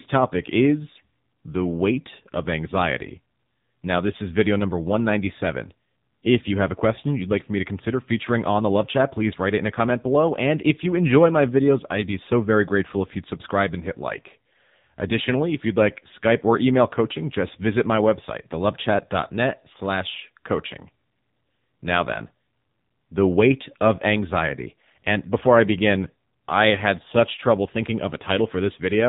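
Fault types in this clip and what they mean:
AMR narrowband mobile codec: heavy phone-codec damage throughout the speech, nothing above 3.8 kHz, and a buzzy, synthetic tone that fits a low-rate mode near 6.7 kbps, unlike plain low-pass filtering.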